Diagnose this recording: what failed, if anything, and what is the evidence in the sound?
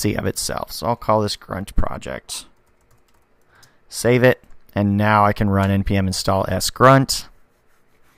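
Nothing in this recording points to a failure at any stage of the chain. The sound holds steady throughout, with no event to mark as evidence of a fault.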